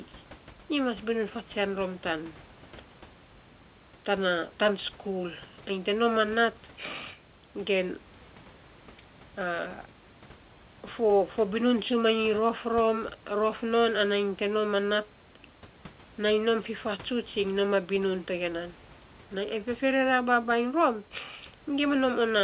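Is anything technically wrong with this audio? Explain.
No, the speech carries its room noise at about 43 dB and about 29 dB below it, and the band stops at 4 kHz, which fits a G.711 A-law call path at 64 kbps working as designed.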